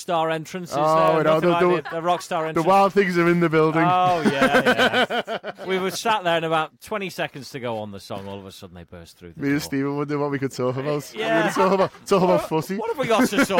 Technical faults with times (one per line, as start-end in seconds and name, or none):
1.08 bit error spike
8.18 bit error spike